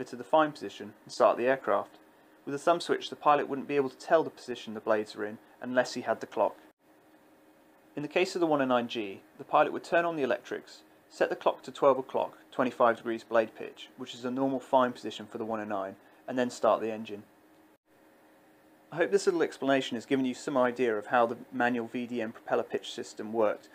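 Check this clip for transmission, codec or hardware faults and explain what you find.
No faults found on listening; nothing in the audio points to a problem in the signal path.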